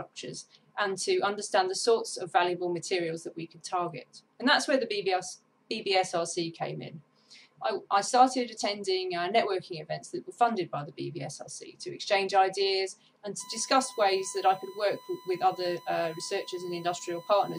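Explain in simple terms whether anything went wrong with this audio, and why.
Electrical noise from a USB connection leaked into the recording, a fault known as USB whine. A USB link draws power in quick, regular bursts, 1,000 times a second, and that rhythm crept in through the power or ground wiring. From 13.40 s until the end at about 17.59 s, you can hear a steady, high whistle at 1 kHz that never changes pitch. It sits clearly beneath the main sound.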